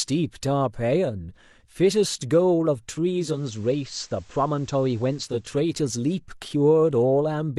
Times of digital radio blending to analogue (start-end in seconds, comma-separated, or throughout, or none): 3.09-5.53